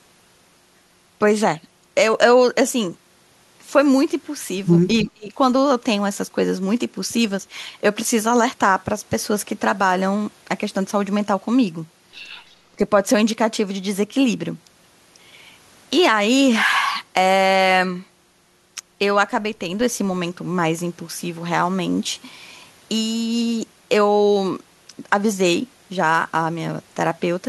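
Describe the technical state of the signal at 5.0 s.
From 5.03 to 5.37 s the speech is pushed down by about 30 dB in a dip, most likely speech suppressed in double talk, where an echo canceller mistook overlapping talk for echo.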